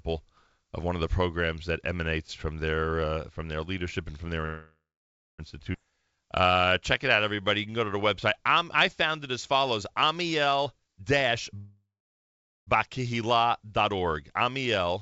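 Speech, heard through a call codec whose band stops at 8 kHz, consistent with G.722 at 64 kbps, with several timing faults. A call audio freeze starts at 4.46 s, right after "leadership and from their", and runs to 5.40 s: the last sound is stretched into a fading buzz that goes silent for about 0.59 s, most likely because packets stalled and the jitter buffer ran dry. On a spectrogram this shows as a smeared, decaying copy of the preceding frame and then a blank column, and the waveform flattens to nothing before the speech resumes with nothing lost. A second freeze of the same kind, 11.56 to 12.69 s, fills 1.1 s, about 0.82 s of it silent. At 5.72 s a skip ahead follows: roughly 0.7 s of speech is dropped in a near-instant jump, likely the receiver shedding the backlog built up during the freeze. The waveform shows two unrelated stretches butted together, and the spectrogram shows harmonics changing abruptly at one vertical seam. 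From 5.90 to 6.66 s, just before "check it", a jitter buffer slow-down plays the speech at 85% speed by repeating pitch periods, adding 120 ms. A milder one follows from 7.16 to 10.57 s at 94%, adding 226 ms. The pitch stays the same while syllables drag, and on a spectrogram the formants and harmonics look horizontally stretched, with repeating cycles in the waveform. Then from 10.62 to 11.56 s a jitter buffer speed-up runs the speech at 129%, cutting out roughly 0.3 s of pitch periods to reduce the delay, so it sounds hurried at unchanged pitch. The spectral patterns look compressed in time, and the waveform has small discontinuities where cycles were removed.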